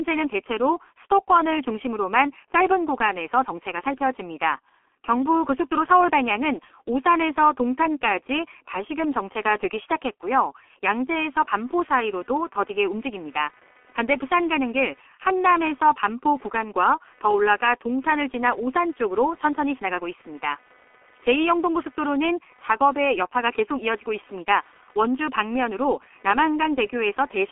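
From the first moment to the last, the speech carries the sound of the G.723.1 codec, and the damage is heavy. Nothing comes through above about 3.7 kHz, and the low end thins out below the telephone band, so the speech is muffled and hoarse and the consonants smear together. The coarse, slowly updated speech model and 30 ms frames fit a rate of about 6.3 kbit/s. A plain low-pass filter would dull the top without this rasp and blur, which marks it as a low-rate codec.

At 11.57 s, computer activity noise begins and continues to the end of the clip. It is a buzz of roughly 300 pulses per second, sitting far below the speech at around 35 dB down. The cause is load changes in the computer disturbing the shared ground of the audio circuit. Mains hum would hold a fixed, even pitch tied to the supply. This buzz instead keeps to its own timing and ignores the speech.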